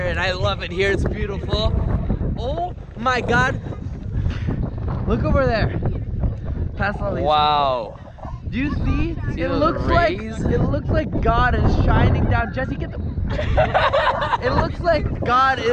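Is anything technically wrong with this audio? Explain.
Yes. From 10.67 to 13.74 s, de-emphasis was applied wrongly. An unneeded treble cut slopes about 10 dB down by 10 kHz, muffling the sound and visibly dimming the spectrogram's upper band.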